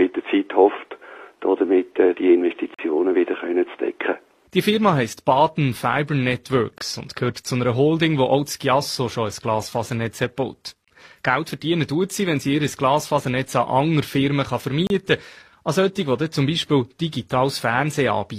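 Hard-edged silent holes of 24 to 43 ms break the sound at 2.74, 6.78, 10.85 and 14.87 s. This is a gap between stream segments, where the timestamps of the 4-second segments don't quite meet.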